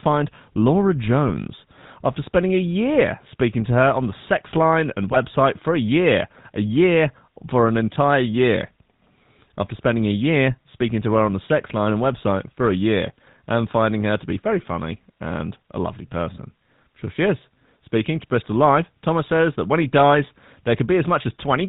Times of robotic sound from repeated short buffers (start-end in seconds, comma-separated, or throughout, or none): none